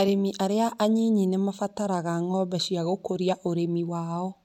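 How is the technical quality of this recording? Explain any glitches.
The recording has no technical faults to report. There are no glitches to explain in this speech clip.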